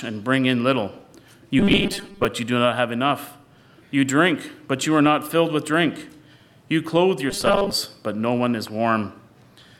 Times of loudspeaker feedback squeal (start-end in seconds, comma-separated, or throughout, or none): none